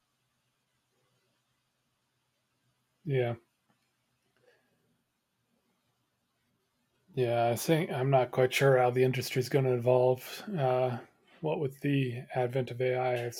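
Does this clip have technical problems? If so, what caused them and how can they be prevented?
Yes. DAB burbling blips over the speech at 6.95 s and 10.70 s. Weak reception let bit errors, a small fraction of a percent, slip past error correction. Corrupted samples then put short noise blips in single sub-bands. A better-placed antenna prevents it.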